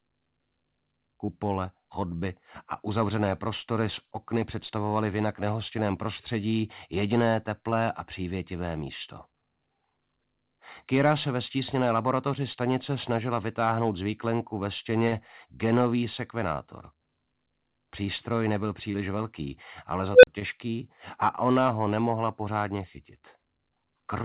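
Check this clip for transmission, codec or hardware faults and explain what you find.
Two kinds of fault stand out: five brief concealed packet losses and one unstable-filter burst. All of it sits inside a band that stops at 4 kHz, consistent with a G.711 A-law call path.

Short concealed packet loss occurs at 1.26, 7.70, 15.08, 18.92 and 20.40 s. About 20 ms went missing each time, and about 40 ms at 15.08 s. The receiver extended the preceding sound, then crossfaded back, producing a momentary smear or wobble. Unlike a dropout, the sound never falls silent.

An unstable filter fault appears from 20.13 to 20.27 s. A recursive filter with bad coefficients fed back on itself, so a tone around 500 Hz swells for about 0.1 s, clips, then collapses into roughly 40 ms of silence while the filter resets. The growing pitched squeal followed by silence separates it from concealment.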